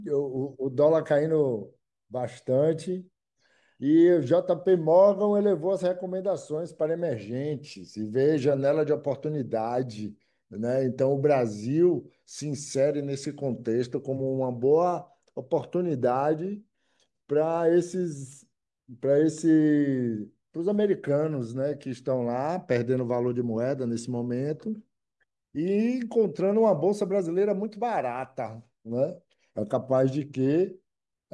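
Nothing technical stands out in this speech recording; there's simply no fault to point to anywhere in it.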